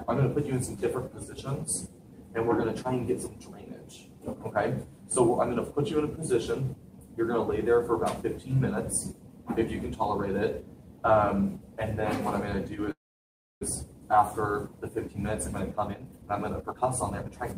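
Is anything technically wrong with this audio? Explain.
Yes, there are two faults, both from a call path.

A call audio freeze runs from 12.91 to 13.63 s. The likely cause is packets stalling in transit so the jitter buffer ran dry. The receiver briefly extended the last sound, and it decays into about 0.65 s of silence before the stream resumes exactly where it stopped. Nothing is lost, but roughly 0.7 s of gap has been inserted, pushing everything after it later.

A jitter buffer speed-up follows from 15.73 to 17.57 s. Having accumulated too much queued audio, the receiver trimmed many tiny segments, each a pitch period or a few long, to catch up. The result is audio playing at about 131% of normal pace with its pitch unchanged, so it sounds rushed. In total, around half a second is cut out over this stretch.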